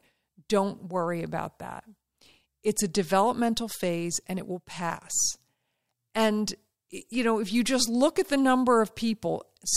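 Nothing to flag here: listening through the whole thing, no technical faults turn up anywhere in the speech.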